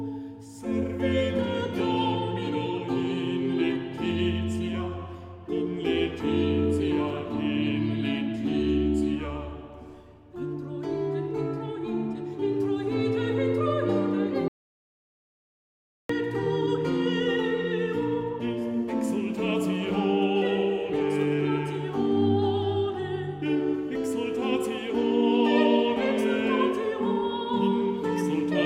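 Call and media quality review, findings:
Audio dropout to silence, 14.48 to 16.09 s. Sound cuts off mid-flow and returns mid-flow; gap about 1.6 s, fully silent, no room tone. Content in that span is lost. Likely component: input path, meaning a disconnected capture device, a failed link or a stray mute. The recorder or encoder kept writing silence through the outage instead of stopping, so the timeline continues unbroken.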